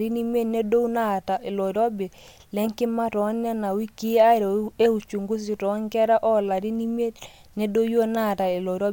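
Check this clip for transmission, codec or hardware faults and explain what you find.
Nothing in the signal chain of the recording shows up as a transmission, codec or hardware fault, and the speech reaches the listener intact.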